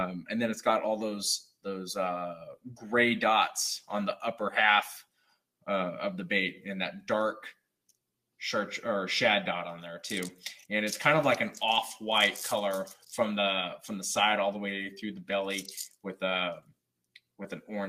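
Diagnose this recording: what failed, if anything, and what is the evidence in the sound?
What failed is call processing: the noise suppressor mistook parts of the sound for noise and clamped them down. You can hear three short dips, at 2.56 to 2.84 s, 5.04 to 5.41 s and 16.61 to 16.76 s, each pulled down by about 18 dB at its deepest. The suppressor's gain decision misfired on this material, so it attenuated wanted sound as if it were background, leaving those brief holes in level.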